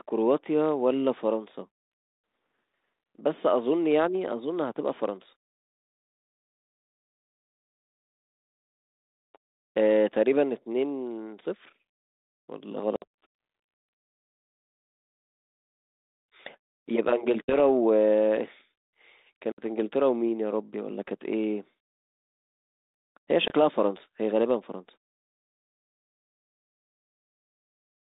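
Packets dropped out of this ADPCM-coded phone speech four times, at 12.96 to 13.04 s, 17.45 to 17.60 s, 19.52 to 19.61 s and 23.48 to 23.51 s, with roughly 60, 40, 60 and 20 ms of audio lost, a few packets at most each time. The gaps were filled with silence, leaving abrupt holes. Because the receiver's adaptive predictor and step size drift out of step with the sender's during a gap, the speech resumes with brief, slight distortion before settling. The speech is limited to a 200 Hz to 3.7 kHz band and coded as G.726 at 32 kbit/s.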